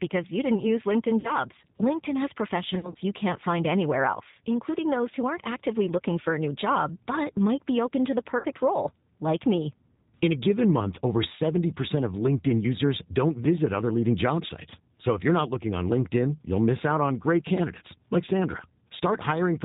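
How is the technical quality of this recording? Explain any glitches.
The technical quality is limited: the whole recording has the thin, slightly rough and synthetic sound of narrowband telephone speech, and three brief dropouts are patched over with buzzy filler.

Throughout, the speech has no content above 4 kHz and a faintly rasping, artificial grain that is plainly audible. This is the G.729 codec at 8 kbit/s. It rebuilds each 10 ms frame from a vocal-tract filter, a pitch predictor and a few pulses rather than from the waveform itself.

At 1.20–1.36 s, 2.75–2.97 s and 8.38–8.47 s (between "be open to the" and "role like me"), the sound smears into a fading buzz or coloured hiss and stays weak briefly afterwards. This is VoIP packet loss concealed by the speech codec. About 40 ms was lost in the first gap and 60 ms in the third, which fits two and three lost packets. In the second, 100 ms went missing in short runs over 200 ms. 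The decoder filled each hole by extending its last pitch and filter at falling gain, and recovery lags because every frame builds on the previous one.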